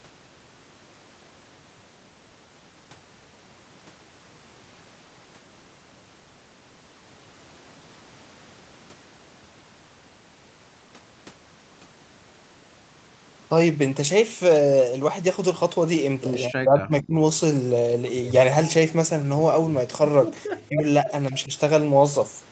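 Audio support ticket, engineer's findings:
Speech dropouts at 16.49–17.19 s, 20.68–20.85 s and 21.30–21.51 s, most likely speech suppressed in double talk. First event deepest, about 40 dB down for around 0.7 s, near cut-out. Later two shallower, about 15 dB and about 5 dB, each a brief dip. Probable component: echo canceller and suppressor. Both ends talking at once; canceller misreads near-end speech as loudspeaker echo and attenuates it. Call mic high-pass and 8 kHz top end are normal, not part of the fault.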